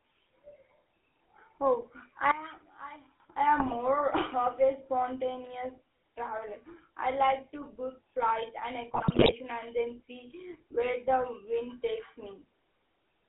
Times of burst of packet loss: none

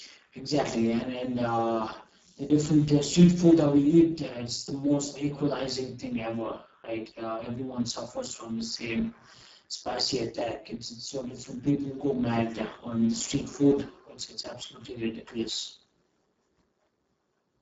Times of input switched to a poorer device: none

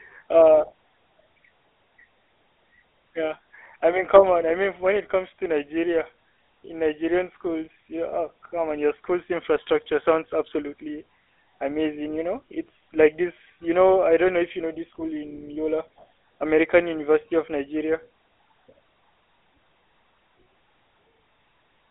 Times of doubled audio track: none

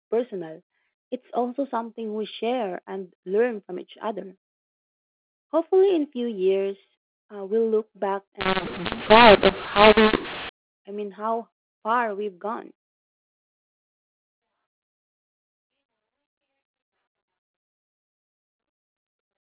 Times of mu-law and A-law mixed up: 8.41-10.49

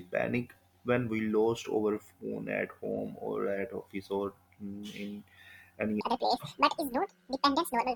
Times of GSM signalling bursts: none

